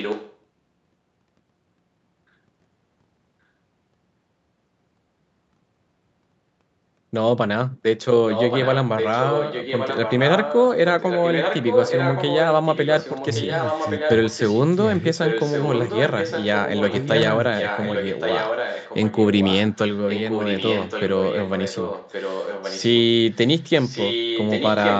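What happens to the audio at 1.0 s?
Nothing goes wrong at 1.0 s: the speech is intact there, with only the call microphone's normal processing trimming the deepest bass.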